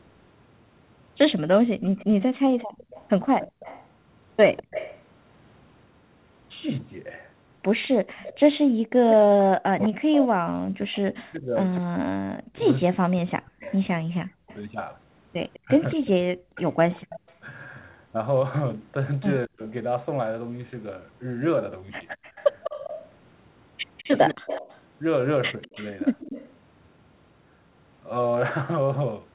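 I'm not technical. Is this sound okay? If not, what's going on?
No. There are three kinds of problem.

Echo leak: from 1.79 to 5.02 s, 7.83 to 9.16 s, 13.65 to 17.37 s and 22.22 to 26.54 s, a faint second copy of the speech trails about 0.2 seconds behind. This is likely one side's loudspeaker being picked up by its microphone and sent back, because the echo remover missed it.

Background gated by the echo canceller: between 2.44 and 2.86 s, the room sound behind the speech briefly drops to near silence, about a fifth of a second in all, then returns. The echo remover turned the microphone right down while the loudspeaker was playing.

Speech suppressed in double talk: from 8.97 to 17.43 s the voice repeatedly dips and breaks up, about five seconds of it affected, with short cut-outs at 19.47 to 19.61 s and 24.33 to 24.44 s. This is likely both sides talking at once, so the echo remover muted the real talker too.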